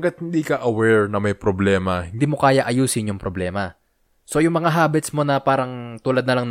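A speech clip that opens with a section at the wrong speed: from the start to about 2.19 s, just before "mo kaya", the sound runs at roughly 0.89 times its proper rate, so it drags a little and sits around two semitones low. Because pitch and tempo drop together and then snap back to normal, it's most likely that this stretch was played or resampled against the wrong clock.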